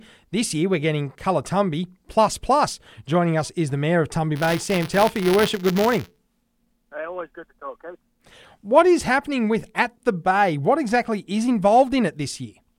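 From 4.35 s to 6.18 s there is buffer tearing. The writing side and the playback hardware have drifted out of step, so they cross inside each buffer period. A small sliver of every buffer carries sound from about 20 ms earlier, with hard joins on either side. The result is a steady robotic buzz at 172 Hz, which fits a 256-sample buffer. It rides on the sound and is heard only while signal is present.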